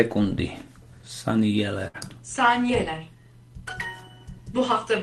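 At 1.87 s a burst of packet loss hits the call stream: several consecutive packets never arrive in time, leaving a hole of roughly 60 ms. The receiver conceals it by stretching the last received sound for about 65 ms, turning it down as it goes, so a held buzz or fading hiss replaces the real audio until playback resumes at 2.01 s with a short stretch skipped. Throughout, the Opus call path caps the audio near 12 kHz, which fits a bitrate around 24 kbps.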